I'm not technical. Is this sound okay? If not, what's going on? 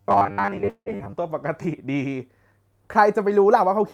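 No, the audio has several problems, all in the first half or so.

From 0.01 to 1.13 s the speech has robotic sound from repeated short buffers. It becomes a stiff, metallic buzz fixed at about 100 Hz, and most of that stretch is affected. The likely cause is that new audio arrived too seldom and the same tiny slice, about 10 ms, was replayed over and over to fill in. That fits the 100 Hz buzz, since a 10 ms slice repeated gives 100 repeats a second.

Inside that stretch, from 0.69 to 0.88 s, there is a call audio freeze. The sound hangs as a fading buzz and then goes quiet for about 70 ms, 168 ms of filler in all. Then the speech resumes exactly where it stopped, so nothing is lost and everything after it arrives 168 ms later. The likely cause is audio held up in transit, which left the receiver with nothing to play. What sets this apart from a skip is that the sound pauses instead of jumping.

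At 0.98 to 1.01 s there is a skip ahead. Roughly 70 ms of speech is simply missing. Only about 10 ms of filler marks the join, so the sound leaps forward almost seamlessly. This happens when a chunk is dropped while later audio is already waiting to play. The result is the opposite of a freeze: no waiting, just a small piece cut out.

From 1.66 to 2.11 s comes a jitter buffer slow-down. The speech plays at about 90% speed, drawn out by 50 ms in total. The playback repeated tiny pieces of the sound to build a reserve. Unlike the robotic fault, the natural pitch stays the same. The speech just drags slightly.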